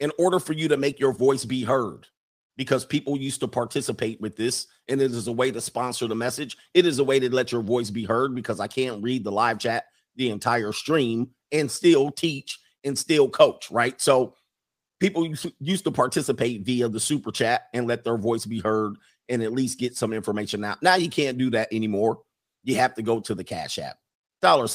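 Listening to the speech recording, nothing stood out as a technical problem at any point.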